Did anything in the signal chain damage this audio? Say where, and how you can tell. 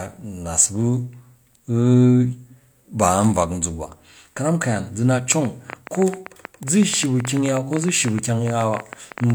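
Yes. From 5.32 s to 9.31 s a train of clicks ticks over the speech, about 40 sharp pops arriving at roughly 9.8 per second but at an uneven pace, with peaks standing some 10 dB above the speech. The clicks share much the same shape, so something is repeatedly injecting one pulse. The likely cause is interference from nearby equipment coupling into the analogue wiring, or a faulty connection or power supply.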